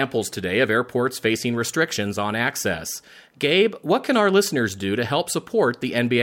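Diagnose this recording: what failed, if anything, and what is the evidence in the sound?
Nothing failed in this recording.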